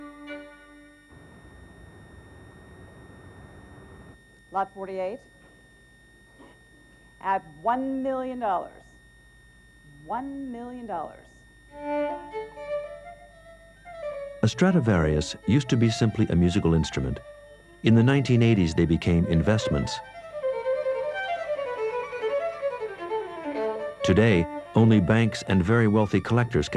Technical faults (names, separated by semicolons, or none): switching supply whistle